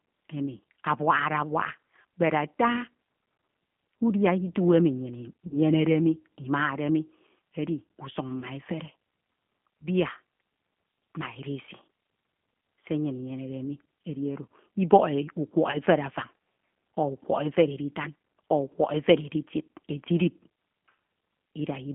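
Throughout, the speech carries G.729 codec damage that is plainly audible. The line band runs from 150 Hz to 3.4 kHz, and the voice is rebuilt from a filter, a pitch predictor and a few pulses at 8 kbit/s. The resulting roughness is constant, unlike the brief, local gaps below.

VoIP packet loss concealed by the speech codec occurs three times. From 5.47 to 5.54 s, 40 ms of audio is missing, which fits two lost 20 ms packets. From 8.40 to 8.45 s, about 20 ms is missing. From 15.71 to 15.78 s, 20 ms is missing just before "efere afan". Each time, the decoder stretches its last pitch and filter into a fading buzz or coloured noise. The disturbance then lingers briefly as the decoder's state recovers, rather than cutting cleanly like a plain dropout.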